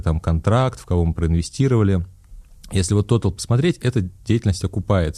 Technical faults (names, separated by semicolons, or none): none